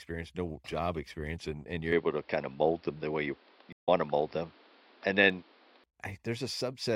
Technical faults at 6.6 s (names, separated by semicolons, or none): none